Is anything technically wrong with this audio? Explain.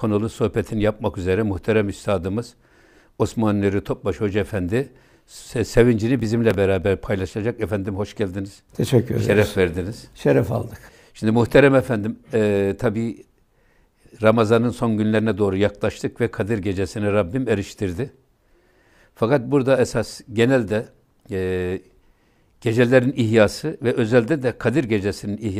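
Yes. From 6.20 to 6.82 s the speech carries a burst of processor overload crackle. The system could not finish its small audio buffers in time, about 1.5 ms each. Several deadlines were missed in quick succession. Each missed buffer was skipped outright, leaving a tiny hole with hard edges. A handful of these holes across that stretch sound like gritty tearing over the voice. It stops once the load eases.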